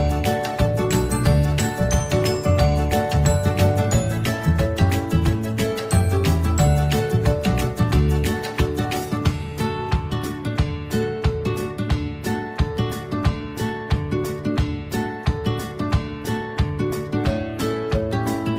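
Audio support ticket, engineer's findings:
No audible faults found on review; nothing to attribute to any component in the chain.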